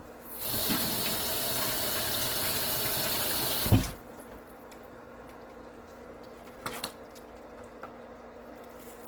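Throughout, tones sound rough, noisy and grainy, yet the band reaches about 20 kHz. This is likely Opus compression in music mode, which fits roughly 16 kbps.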